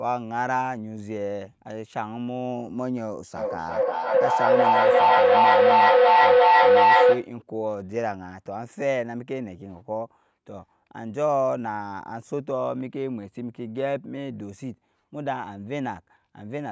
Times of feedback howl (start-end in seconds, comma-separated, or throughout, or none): 3.36-7.35